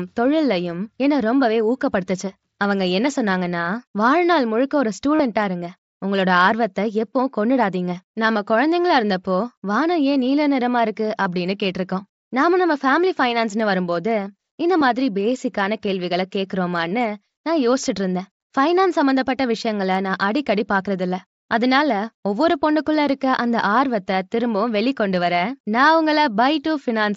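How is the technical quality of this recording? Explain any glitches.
Three brief dropouts mark the recording, all from concealed Bluetooth headset packet loss on the link between headset and phone, heard through the light graininess of the wideband mSBC headset codec. At 5.15 to 5.20 s (45 ms), 11.23 to 11.26 s (22.5 ms) and 14.80 s (15 ms), packets never arrived, so the receiver filled each gap by repeating a closely matching slice of the preceding waveform. The 45 ms patch is the most audible, a short buzzy held tone with a slight warble as the real speech resumes. The two shorter ones are briefer versions of the same held tone.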